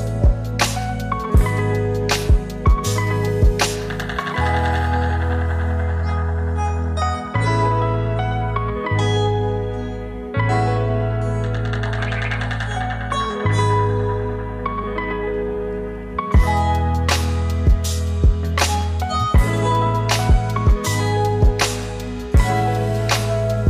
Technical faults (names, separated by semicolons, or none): none